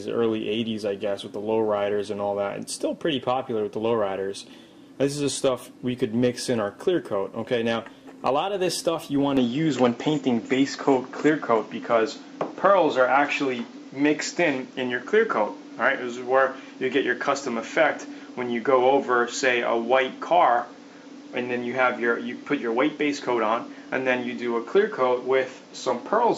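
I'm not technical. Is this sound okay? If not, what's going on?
No. From 9.37 s to the end, the sound abruptly turns duller and boxier, the level shifts, and a faint new background noise appears, with no gap at the change. The likely cause is an input switched to a poorer device. The instant change of tone, loudness and noise together sets it apart from a simple tone-control cut.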